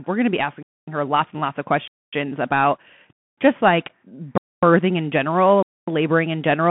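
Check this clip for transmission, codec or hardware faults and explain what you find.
Two faults here: the whole clip has gone through a Bluetooth headset link, and the speech keeps stopping dead at regular points.

Throughout, the speech carries Bluetooth CVSD headset codec damage. It's squeezed into a phone-style band of roughly 150 Hz to 3.4 kHz, with nothing above 3.8 kHz. CVSD tracks the waveform one up-or-down step at a time, so s sounds come out scratchy and there's a grainy hiss underneath.

There are five gaps between chunks, at 0.63, 1.88, 3.13, 4.38 and 5.63 s, each a 250 ms hole. The audio arrives in 1 s chunks and silence is inserted between them, so nothing is lost but the speech is chopped at every join.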